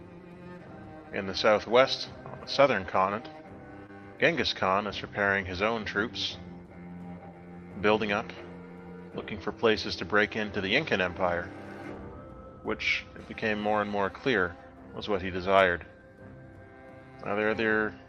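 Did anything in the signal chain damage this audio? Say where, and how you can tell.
Yes: short concealed packet loss at 1.83–1.87 s and 3.87–3.90 s, a network fault. About 20 ms arrived too late, so the receiver extended the preceding sound, leaving brief smears.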